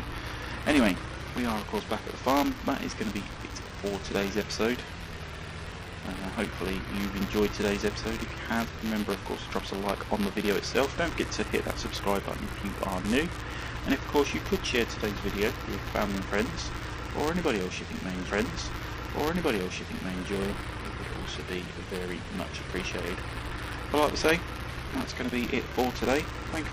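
Throughout, buffer tearing: writer and reader slipped, so a sliver of each 256-sample buffer replays audio from roughly 10 ms earlier, producing a steady 172 Hz robotic buzz under the sound. From 18.25 s to 20.25 s, a stream segment repeated: the player queued the same segment twice, so about 2.0 s plays again after a small blip at the jump back.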